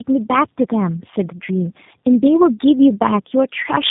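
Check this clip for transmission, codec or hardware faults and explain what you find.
There is one fault, tandem speech coding, and it runs through the whole clip. The speech sounds rough, muffled and warbly, with nothing above 3.8 kHz. That points to two 8 kbit/s G.729A coders with a G.711 link between them, the second coder re-encoding the first one's already degraded output.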